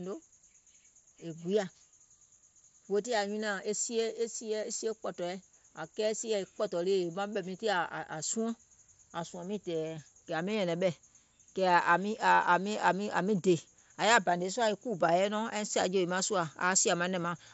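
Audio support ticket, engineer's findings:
Nothing to flag on this one: the speech comes across the Bluetooth mSBC headset link with its band topping out near 7.7 kHz, which is just what that wideband path does.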